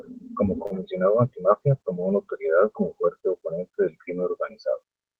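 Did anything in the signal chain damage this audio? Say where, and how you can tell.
Yes. At the network stage, a short stall from a late packet appears at 0.66 to 0.71 s. The sound there is held for about 39 ms with a faint buzz or dip, then resumes where it left off. The jitter buffer ran dry and the receiver stretched the last audio until the packet arrived, adding 39 ms of delay.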